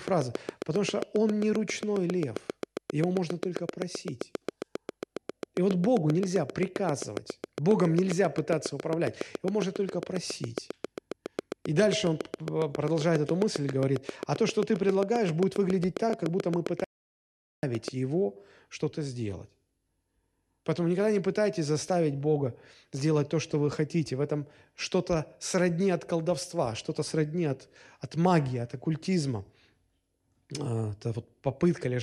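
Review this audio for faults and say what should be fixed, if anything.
A train of clicks runs from 0.08 to 17.89 s: regular ticks at about 7.4 per second, roughly 150 in all, peaking well above the speech and audible in the pauses too. The steady spacing and much the same shape set it apart from random crackle or clipping, and it is likely interference from nearby equipment or a faulty connection or power supply coupling a pulse into the signal. Shielding cables, moving away from the source, or fixing the connection or power supply would prevent it.

Repeated frames occur from 16.09 to 16.12 s. A single 26.1 ms block plays twice, which fits one MP3 frame, and it is heard as a brief stutter. Unlike a dropout, nothing is lost; the audio simply gains 26.1 ms. Verifying frame writes and transmission would prevent it.

An audio dropout to silence cuts the speech off from 16.84 to 17.63 s, erasing 0.79 s. 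The gap is silent with no room tone left, which distinguishes it from a quiet pause or a gate closing. A disconnected device or a failed link likely caused it. Securing connections and monitoring the input level would prevent it.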